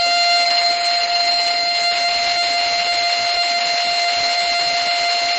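From the start, the music has a dull, crowded sound. Nothing reaches above about 8.4 kHz. Smeared, watery artefacts sit on top of one another. The pattern points to transcoding between lossy codecs. The audio was likely encoded at a low bitrate, then re-encoded more than once. Each pass kept the earlier damage and added its own. The lowest cut-off in the chain set the ceiling. The final stage sounds like a low-rate AAC-type encode.

At 2.37 s a broken-record loop begins and runs to the end. A 0.50 s fragment repeats six times, back to back. The joins are exact and mechanical. The music never moves forward again. The player or stream likely stalled and kept resending the last fragment it held. Whatever should have played after 2.37 s is missing.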